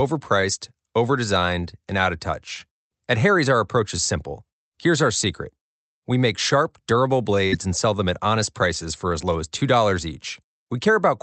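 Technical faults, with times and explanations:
7.47 to 7.54 s, burst of packet loss: the speech does not fall silent. For about 50 ms the last sound is stretched into a held buzz or hiss that fades as the receiver conceals missing packets. The speech then resumes with about 40 ms skipped. That skip sets it apart from a plain dropout, where the audio would go quiet and pick up where it left off. The concealment comes from the Opus call path, which is limited to about 8 kHz throughout.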